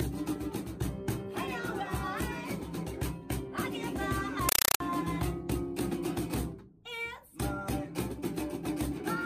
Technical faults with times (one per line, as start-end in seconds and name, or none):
4.49-4.80 compressed stream played as audio